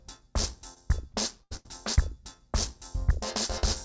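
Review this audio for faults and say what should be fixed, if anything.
Between 0.74 and 1.67 s there's repeated packet loss giving a choppy, robotic sound: four holes, the longest about 81 ms, each patched by stretching the last bit of audio, so around a fifth of that stretch is concealment rather than real signal. The band-limiting, with nothing above 8 kHz, fits the G.722 call path and isn't the problem here. To prevent it, fix the network loss or jitter on that link, or give the jitter buffer and FEC more headroom.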